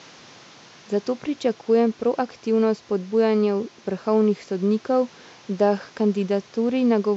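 No technical faults are audible.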